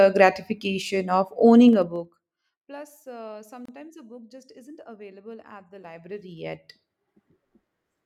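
From 1.66 to 2.43 s the speech is faded down by roughly 25 dB, but the fade is applied in 2 dB steps at around twenty per second instead of as a continuous ramp. Each jump in gain makes a small discontinuity in the waveform, so the fade carries a fast ticking texture: zipper noise.

At 3.65 s a 29.6 ms silence cuts into the running speech. This is a gap at a join of encoded pieces. When segments are encoded separately, each one gets encoder start-up delay and final-frame padding, and if those are not trimmed before the pieces are joined, they remain as dead air. Its spacing fits pieces about 4 s long. The edges are smeared by the codec, and the speech resumes exactly where it broke off.

From 5.72 to 7.21 s the level rises by roughly 25 dB, again in 2 dB increments, this time at about ten per second. The slower stepping gives a more widely spaced ticking than in the earlier fade, the same zipper noise produced by unsmoothed gain updates.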